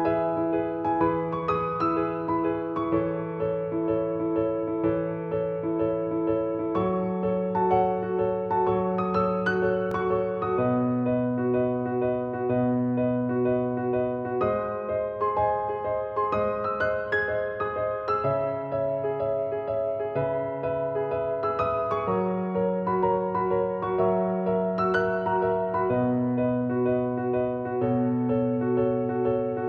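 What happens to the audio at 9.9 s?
At 9.91 s there is a single repeated buffer. New audio failed to reach the output in time, so the device replayed its last block once more, a block of about 1.45 ms, which fits a 64-sample buffer. Because the repeated piece is so short, the two hard joins sit almost on top of each other and the event is heard as a brief click, not a stutter, with roughly a millisecond and a half of audio displaced.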